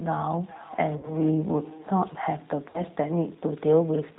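Speech, carried through the G.729 codec for the whole clip. The damage is plainly audible. Nothing above 4 kHz survives, and the voice sounds rough and synthetic. That character fits the 8 kbit/s low-bitrate model coding of G.729A. VoIP packet loss concealed by the speech codec appears twice. From 0.97 to 1.15 s, about 60 ms of audio is missing, which fits three lost 20 ms packets. From 2.70 to 2.83 s, about 40 ms is missing. Each time the decoder stretches the last sound into a buzzy tone or coloured noise that fades. The voice then stays weak or distorted until the end of each span.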